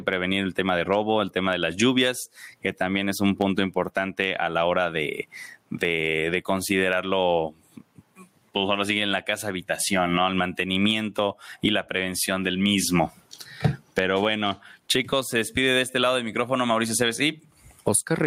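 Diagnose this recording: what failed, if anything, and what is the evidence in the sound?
Gain pumping throughout. Gain swings around 20 dB, ducking under loud speech. Likely cause: excess input gain into a fast call-processing limiter.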